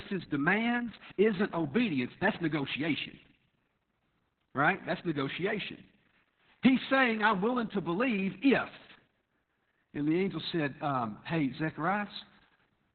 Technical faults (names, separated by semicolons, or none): Opus voice compression